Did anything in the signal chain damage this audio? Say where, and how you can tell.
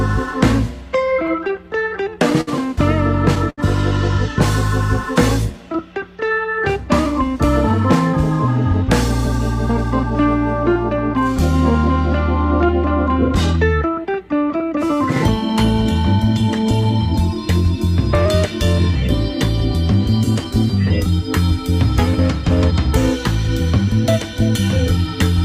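Yes. The network stage, at the receiver's jitter buffer, shows repeated stalls (stutter) from 0.97 to 2.49 s. Ten times in that stretch the sound hangs on what it was already doing, for 145 ms in all, about a tenth of the span, with the longest hold 62 ms. Packets were arriving late or too slowly, so the buffer kept running dry and the receiver extended the last sound each time. Unlike packet loss, nothing is skipped afterwards. The passage just drags and judders.

A single short stall from a late packet follows at 3.50 to 3.60 s. One sound is held for 75 ms, with a faint buzz or dip, and then playback resumes exactly where it left off. One packet missed its slot, the buffer emptied, and concealment bridged the wait. The delay grew by 75 ms as a result. This is a single isolated hold rather than a cluster, and because no audio is lost, it is not a dropout.

Jitter buffer speed-up appears from 7.72 to 10.04 s at 102% speed and from 12.65 to 13.65 s at 104%. 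Each stretch trims roughly 50 ms. The receiver had built up more buffered audio than its target, likely from the earlier late packets arriving together, and it shed the surplus by cutting out pitch-period-sized pieces. The pitch stays the same while the pace quickens slightly, and that is what separates it from a resampling or clock-rate error, which would shift pitch too.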